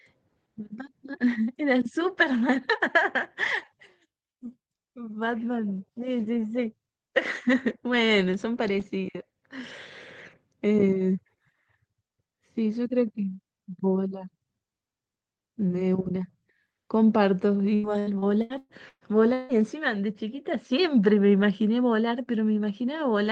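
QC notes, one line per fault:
17.75–19.52 s, repeated packet loss (robotic sound): seven holes in quick succession, the longest 160 ms, are patched by stretching the previous sound, so over a third of the span is synthetic and turns choppy; the spectrogram shows smeared, frozen harmonic bands between broken segments.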